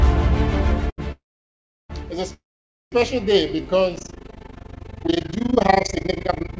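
At 0.90 s the sound sticks for a moment. It runs to 1.00 s. This is a short stall from a late packet. A packet did not arrive in time, so the jitter buffer emptied. The receiver held the last sound for about 80 ms to cover the wait. It then resumed from the same point. Nothing is lost. One sound simply lasts too long.

From 1.12 s to 1.92 s the audio halts. The last sound trails off and fades. Then comes about 700 ms of near silence. Playback then picks up where it stopped. This is a call audio freeze. The likely cause is packets delayed in transit, leaving the jitter buffer dry. About 776 ms of filler is inserted. Nothing is skipped. The audio just arrives later.

A second call audio freeze runs from 2.34 s to 2.94 s. It sounds the same: a fading tail, then roughly 510 ms of silence, then a clean resume. About 584 ms of filler is added. Again, packets held up on the way are the likely cause. 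The total delay grows further.

From 3.20 s to 3.63 s the audio drags. This is a jitter buffer slow-down. The buffer needed a reserve. The receiver repeated single pitch periods again and again. That added about 47 ms. Playback runs at about 90% speed, yet the pitch does not drop. Sounds are drawn out.

At 3.96 s an overlap-add ripple begins. It lasts to the end of the clip. The audio was split into windowed frames and rejoined. The overlap does not sum to a steady gain. So the level swings once per frame, around 30 times a second. The dips are deep, about 60 dB. It sounds like a rough flutter. Throughout, nothing sits above 8 kHz, which fits a G.722 call codec.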